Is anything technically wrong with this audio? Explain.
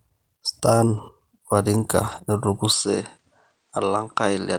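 Yes, there are two kinds of fault.

Lost packets rebuilt from error correction occur at 0.93 to 0.99 s and 2.11 to 2.17 s. Each time, about 40 ms, consistent with two packets, is filled from low-bitrate backup copies, so the speech turns briefly rough and grainy without any gap.

From 2.72 s to the end, the input likely switched to a poorer device. The sound shifts at once, with no silence, to a duller tone with nothing above 9.4 kHz. It gets roughly 5 dB quieter, and a faint new noise floor appears far below the speech.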